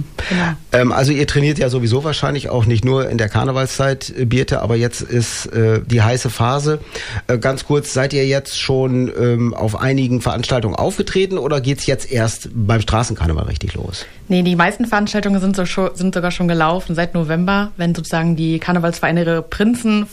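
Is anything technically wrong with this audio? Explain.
Yes, two bit error spikes, at 1.04 s and 7.53 s. A single flipped bit made one sample jump, peaking near -2 dBFS then -20 dBFS, heard as sharp broadband ticks.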